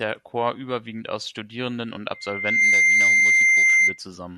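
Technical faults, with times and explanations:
2.14 to 3.99 s, loudspeaker feedback squeal: a single piercing tone near 2.1 kHz swells over about half a second until it sits around 15 dB above the speech, because the microphone is hearing its own loudspeaker and the loop gain at that frequency exceeds one.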